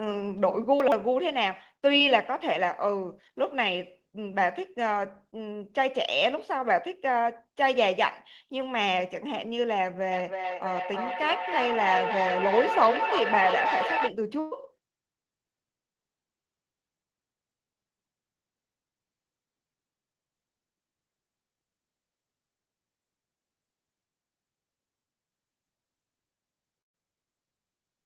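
At 0.80 to 0.92 s, chunks out of order: a 40 ms block plays two chunks late, after the audio that should follow it. The speech jumbles briefly, and a waveform shows three abrupt discontinuities at the chunk joins.

From 1.97 to 2.02 s, short concealed packet loss covers 20 ms of missing audio. The decoder extends the preceding sound and blends back, giving a brief smear. A spectrogram shows a brief, overly smooth patch where fine detail flattens.

From 10.13 to 14.14 s, feedback echo between two devices makes speech return at roughly a third of a second, reaching about 3 dB below the direct speech. Each repeat sounds thinner and more ringing. A spectrogram shows stacked, time-shifted copies of each syllable, with narrow resonant bands persisting.

Two bursts of packet loss each remove 120 ms. At 14.40 to 14.53 s the last sound is stretched out and turned down before speech resumes further on, visible as a smeared, decaying band. 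At 26.81 to 26.95 s the fill fades almost at once, leaving about 110 ms of flat, empty waveform.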